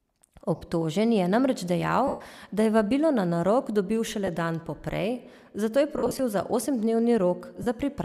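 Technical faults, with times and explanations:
0.56–0.62 s, 2.07–2.21 s, 4.26 s, 5.98–6.20 s and 7.62–7.67 s: lost LE Audio frames. Brief gaps turn into a grainy, noisy smear. The decoder refills each loss by repeating the last spectrum with random signs, which fits 7.5 ms frames from likely LC3 coding. The 2.07 s gap fades toward silence. The 5.98 s damage is scattered, with its longest run about 50 ms.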